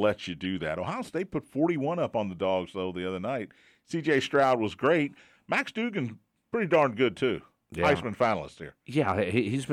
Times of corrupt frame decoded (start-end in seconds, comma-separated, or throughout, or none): 0.44, 4.18, 6.74